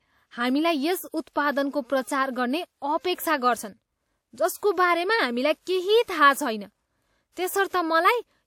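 At 4.57 s, pre-echo appears: the transform codec spread quantisation noise across its block, so about 59 ms of hiss precedes a sharp speech onset, softening it. A spectrogram shows a faint broadband smear before the attack; the waveform shows low-level fuzz ahead of the rise.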